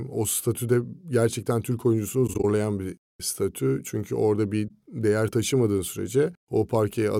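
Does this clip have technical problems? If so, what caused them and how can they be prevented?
Yes. The speech briefly fades into soft-edged gaps. These occur as scattered holes of about 20 ms between 2.27 and 2.44 s before "bir statü", and as one gap at 4.68 s between "orada bir" and "değer taşımadığın". This is AAC frame loss with muting: lost frames were zeroed, and the overlapping windows blurred the edges. Forward error correction or decoder concealment would prevent it.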